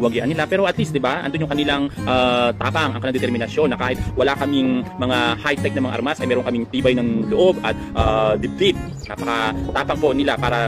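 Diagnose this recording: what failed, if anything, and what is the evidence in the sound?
Nothing failed at any stage here; no dropout, glitch or distortion turns up anywhere in the recording.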